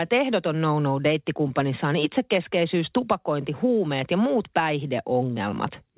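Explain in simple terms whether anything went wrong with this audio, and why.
Nothing went wrong with this recording; no faults can be heard in it. It came through an ordinary internet call connection using a telephone-grade codec, so nothing above about 4 kHz is present, which gives the speech the narrower sound of a normal phone call.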